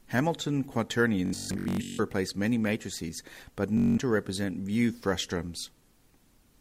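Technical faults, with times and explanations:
1.26–2.00 s: Bluetooth stutter. Packets went missing, so the receiver replayed its last short slice. About 597 ms is lost in bursts, with the longest run 149 ms, heard as a machine-gun buzz.
3.78–3.98 s: Bluetooth stutter. A shorter burst, with 192 ms lost. The repeated slice buzzes, then the sound jumps ahead as if it had played on.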